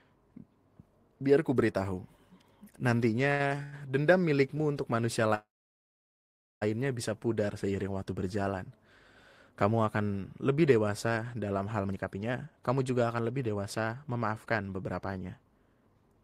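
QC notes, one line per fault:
3.29 to 3.74 s, repeated stalls (stutter): the speech catches four times in under half a second, with the longest hold about 98 ms and 211 ms filled in all, nearly half the span. Packets arrived later or slower than playback, so the jitter buffer kept emptying and the receiver stretched the last sound each time. Nothing is lost, so it drags rather than skips. Unlike a freeze, these are brief and clustered instead of one long gap.
5.35 to 6.63 s, call audio freeze: the speech stops for about 1.27 s. A short fading continuation of the last sound gives way to roughly 1.13 s of silence, and then the speech resumes exactly where it left off. The likely cause is packets held up in transit that drained the jitter buffer, inserting a gap and adding about 1.27 s of delay. A single long pause with nothing missing separates it from the stutter and from packet loss.
11.84 to 16.23 s, jitter buffer speed-up: from here to the end, the speech runs at about 120% speed and sounds hurried, with pitch unchanged. 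After the earlier delay, the buffer held more audio than its target, so the receiver trimmed many tiny pitch-period slices in succession, removing around a second overall. Steady pitch distinguishes it from resampling or a wrong clock rate, which would raise the pitch along with the tempo.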